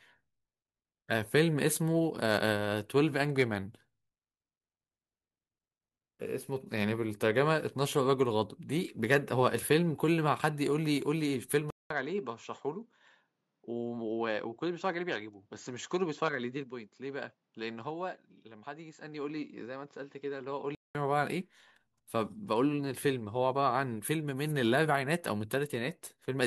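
Input switched to a poorer device from 11.70 to 20.95 s, likely: after a 200 ms silence the speech turns quieter and duller, cut off above 7.6 kHz, with faint new background noise.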